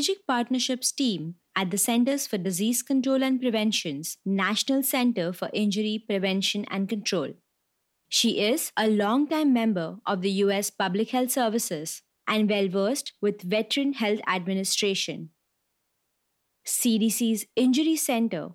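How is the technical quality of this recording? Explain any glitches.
No glitches turn up in this speech recording. There is nothing to explain here.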